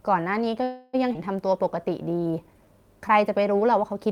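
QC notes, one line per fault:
0.63–0.95 s, call audio freeze: the last sound before the stall is carried on as a fading buzz or hiss for about 300 ms, never dropping to full silence. The speech then resumes exactly where it broke off, with nothing lost. This is likely packets arriving late so the jitter buffer ran dry, leaving the receiver to stretch out what it last had. The wait adds roughly 300 ms of delay to the rest of the clip.
1.13–1.16 s, skip ahead: the speech jumps forward abruptly, with only a tiny stitched join of about 11 ms, and around a tenth of a second of sound is simply gone. The two sides of the cut meet almost directly, so the listener hears a clipped fragment rather than a pause. Later audio was already queued, and a stretch was discarded to catch up, pulling the delay back by about 100 ms.
1.47–2.66 s, jitter buffer slow-down: across this stretch the speech drags, running at about 91 % of normal speed while keeping the same pitch, so sounds are drawn out. 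The receiver was rebuilding its reserve by repeating single pitch periods and slivers of pauses many times over, adding 112 ms in total. Repeated cycles rather than resampling explain the unchanged pitch.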